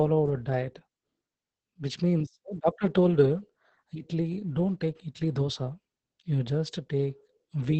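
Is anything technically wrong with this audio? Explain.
Yes, the whole clip carries Opus voice compression, and it's heavy. The speech runs through the SILK linear-prediction coder in wideband mode, so the top end is cut away and the excitation is coded coarsely. The damage points to a very low rate, something around 10 kbps. You hear it as muffled, hoarse speech with a slightly robotic edge, present from start to finish.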